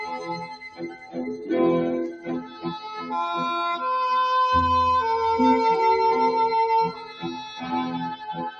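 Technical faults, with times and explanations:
Throughout, noise suppressor applied to music or sounds: the level breathes and pumps, with sustained parts and decaying tails sinking while sharper onsets stay fairly intact, so the sound thins and flutters from moment to moment. A speech-oriented suppressor is treating steady, tonal and ambient content as background noise and pulling it down, with the amount of reduction swinging by roughly 10 dB as it changes its mind about what counts as noise.
0.13–1.17 s, 2.12–2.66 s, 6.92–7.68 s and 8.15–8.35 s, sound cut by the noise suppressor: in these stretches the sound drops away noticeably, by about 14 dB at its deepest in the first, about 9 dB in the second and third, and about 10 dB in the last, and held or fading material loses body or gets its decay clipped short. Here the suppressor classed the sound as noise and attenuated it harder than elsewhere.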